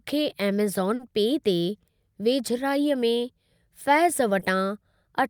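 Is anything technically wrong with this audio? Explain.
Yes, the speech has short concealed packet loss twice, at 0.95 to 1.01 s and 4.39 to 4.43 s. Missing audio of about 40 ms and 20 ms was filled by extending the preceding sound, leaving brief smears.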